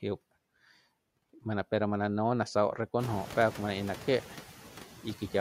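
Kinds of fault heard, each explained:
Noise suppressor artifacts: there's a suppressor running through the whole clip, pulling down whatever frequency bands it decides are steady noise, frame by frame, by about 11 dB. So the background dips away in the gaps between words and comes back up underneath them as each word lands. The room noise jumps by about 17 dB around the 3-second mark, so the background is much stronger from there on.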